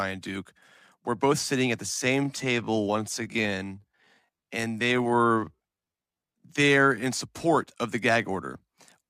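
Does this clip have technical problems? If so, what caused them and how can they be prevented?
Yes. From 1.82 to 7.06 s, between "both sitting at the" and "support of the gag", a time-stretched section runs at 0.669 speed with unchanged pitch, so the speech drags. Software likely repeated short pieces to lengthen it. A spectrogram shows widened syllables at normal harmonic heights. Prevent it by fixing timing with edits instead of stretching.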